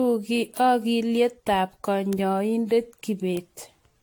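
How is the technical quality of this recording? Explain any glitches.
The recording has two kinds of fault: a swirly, hollow coloration throughout, and two isolated ticks.

Generation loss: the speech was likely decoded and re-encoded about ten times with a lossy codec, which fits repeated AAC passes. Each pass adds its own quantisation noise, so the sound turns smeared, swirly and hollow, attacks blur, and nothing remains above 19.2 kHz.

Bit error spikes at 2.13 s and 3.37 s: a flipped bit made the sample value jump and snap back, which fits a flip affecting one or two samples. Each is heard as a single sharp, broadband tick unrelated to the speech.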